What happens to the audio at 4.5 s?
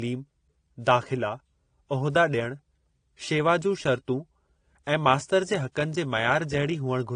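Transcoding between lossy codecs is audible at 4.5 s, as it is through the whole speech clip. Nothing is present above about 9.7 kHz, and two kinds of coding artefact sit on top of each other. The likely cause is a low-rate encode, consistent with AAC-LC at around 32 kbit/s, later re-encoded in a WMA-style codec that spent its bits reproducing the first codec's artefacts, added its own, and kept the earlier band limit.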